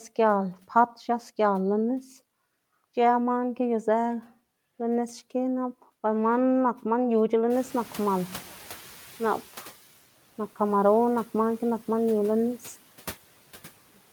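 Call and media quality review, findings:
Noise suppressor catching up, 7.5–9.84 s. Room noise jumps about 19 dB. Lagging noise estimate passes it under-reduced, then cuts about 8 dB over 2.34 s.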